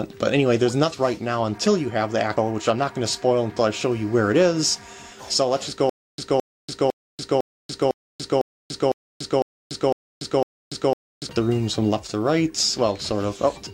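At 0.89 s, compressed frames are skipped. Whole frames never reach the output, so the audio jumps ahead by about half a second. That fits roughly ten frames of about 46 ms each.

From 5.89 to 11.29 s comes a stutter with silent gaps. A 0.22 s burst repeats ten times, every 0.5 s, with 0.29 s of digital silence between. The likely cause is a stalled stream replaying its last fragment. The audio meant for that span is lost.

At 13.52 s, frames are skipped again. This jump is larger, near 0.7 s, consistent with about twenty frames.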